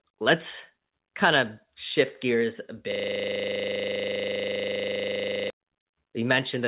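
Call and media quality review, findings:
Microphone overload, about 2.0 s just before "gears a" and 6.31–6.38 s: flattened, crackly peaks, about 1 dB and about 3 dB over full scale, roughly 1% of samples. Likely input gain set too high for the converter.

System hang loop, 2.92–5.5 s right after "gears a": one 40 ms slice repeats about 65 times, giving a rigid 25 Hz buzzing stutter. Driver or host stalled while hardware kept replaying its ring buffer.

The call path's band limit at 4 kHz is audible, which fits 64 kbps G.711 mu-law.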